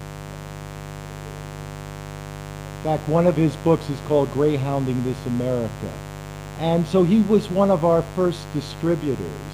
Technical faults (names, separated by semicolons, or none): mains buzz